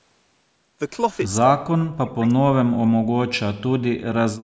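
At 1.13 to 1.17 s there is a brief echo leak: a faint, separate copy of the speech trailing the original by 169 ms, sitting far below the speech itself. The likely cause is a loudspeaker on the far end whose echo canceller let a scrap of its own microphone pickup slip back into the call. Reverberation would instead smear the sound into a smooth decaying tail, but this is a distinct delayed repeat at one fixed offset.

From 1.4 to 3.4 s the speech is suppressed in double talk. The voice dips sharply, at its deepest by around 40 dB, in broken pieces adding up to roughly one and a half seconds. It sounds as if the talker is being pushed back while the other side is also speaking. Unlike packet loss, the drops have no clicks or hard digital gaps. The level pumps down and back up, likely as the canceller, unable to separate talker from echo, turns both down.

From 4.4 s to the end, the background is gated by the echo canceller. 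The room sound falls away by about 36 dB for about a tenth of a second while the loudspeaker plays, as the canceller clamps the microphone. Double-talk suppression cuts into the talker's voice, whereas here it is the ambient bed that vanishes. That makes the gate audible as a sudden hole in the room tone within audio that already carries nothing above 8 kHz from the call path.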